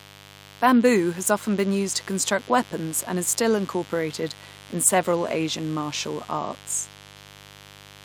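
Sharp switching spikes from the 50 Hz mains leak into the signal throughout, producing mains buzz: a steady, raspy drone sitting roughly 25 dB beneath the speech.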